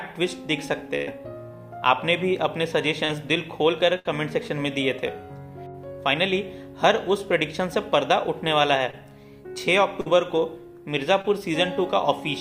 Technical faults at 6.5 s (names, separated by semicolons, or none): none